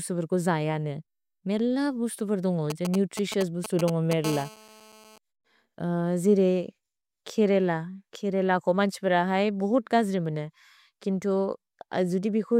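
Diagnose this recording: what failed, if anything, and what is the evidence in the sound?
GSM signalling bursts, 2.70 to 4.13 s: a galloping run of ticks and short buzzes at about 217 Hz, nearly as loud as the speech. This is an analogue-stage fault; a nearby 2G phone sending signalling bursts is rectified by the audio circuit's wiring or input stage.

GSM phone buzz, 4.24 to 5.18 s: a steady, raspy 217 Hz buzz rich in harmonics, about 15 dB below the speech and unrelated to it. It comes from the same analogue pickup, with the phone now transmitting in bursts 217 times a second as in a call, its radio pulses demodulated into the audio path.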